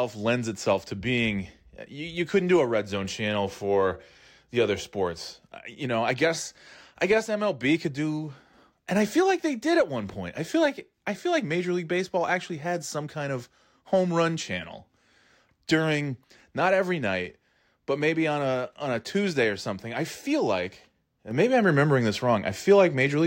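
A sudden gain jump arrives at 21.31 s and holds until the end of the clip: the level steps up by about 5 dB from one instant to the next, with no fade or ramp between the two settings. The speech and the background noise beneath it rise together by the same amount, so the floor lifts along with the voice. This points to a gain change likely applied as a single step rather than smoothed over time.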